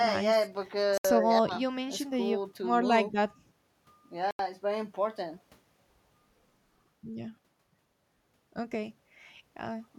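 A speech recording with two brief gaps where the sound drops to silence and then resumes: about 70 ms from 0.98 to 1.05 s, and about 80 ms from 4.31 to 4.39 s. These are most likely Bluetooth stalls, where the headphones' buffer emptied while delayed packets were resent. Unlike a crackly dropout or a muted fade, each gap is a clean, abrupt hole that stops and restarts without any ramp.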